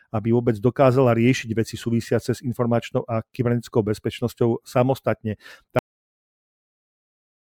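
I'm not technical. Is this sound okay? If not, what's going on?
No, it has a cut-off end: at 5.79 seconds the speech just stops mid-sound and drops straight into dead silence, because the last stretch of audio never got saved.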